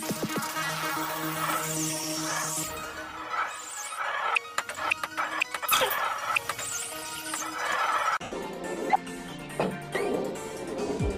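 At 8.23 to 8.32 s, lost LE Audio frames leave an 82 ms gap, which the decoder fills by reusing the last spectrum with random signs, fading into a noisy smear.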